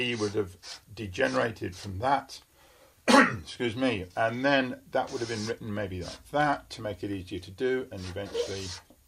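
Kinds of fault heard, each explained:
No faults can be heard in this recording.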